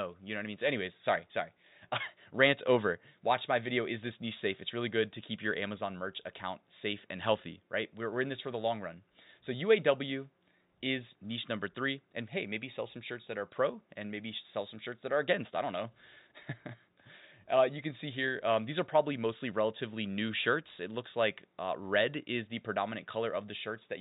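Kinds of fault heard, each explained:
No faults are heard in this speech recording.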